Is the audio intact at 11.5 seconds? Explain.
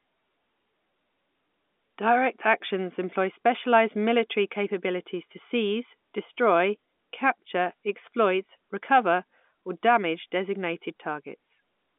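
Yes, the audio is intact at 11.5 seconds, with the speech carried through the telephone line's narrow band.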